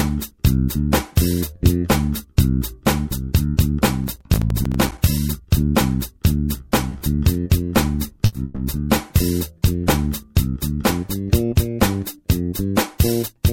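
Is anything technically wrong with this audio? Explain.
Yes, there are four kinds of fault.

From 4.04 to 4.98 s, processor overload crackle: about twenty short buffers, fitting roughly 5 ms each, missed their deadlines and dropped to silence. This is heard as gritty tearing and seen as a dense row of hard-edged waveform gaps.

Short stalls from a late packet occur at 6.89–6.93, 6.98–7.02 and 8.26–8.35 s. Each time the jitter buffer ran dry and the last sound was stretched by 20, 20 and 70 ms, heard as a brief held buzz and seen as smeared, flattened spectrogram bands.

From 8.45 to 8.59 s, a call audio freeze, likely from delayed packets, prolongs the sound for 120 ms as a fading buzz. The spectrogram shows repeated frames stretched horizontally before normal detail resumes.

From 12.72 to 13.51 s, a jitter buffer speed-up removes around 70 ms of pitch periods, so the sound runs at 108% speed with unchanged pitch, hurried and slightly compressed on the time axis.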